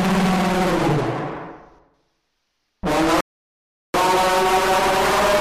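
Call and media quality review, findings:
Playback stall, 3.21–3.94 s: sound cuts out mid-flow for about 735 ms, then resumes. Waveform shows a flat gap, spectrogram a blank vertical band across all frequencies. Likely the player starved of data or its thread was blocked until recovery.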